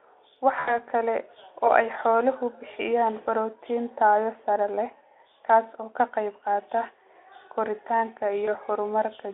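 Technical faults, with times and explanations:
0.59 to 0.79 s and 8.45 to 8.50 s, VoIP packet loss concealed by the speech codec. Audio dropped out, about 80 ms before "kala oo ay xooluhu", then 20 ms. The decoder replayed its last pitch and filter at falling gain. This gives a brief, fading smear in the narrowband Speex sound.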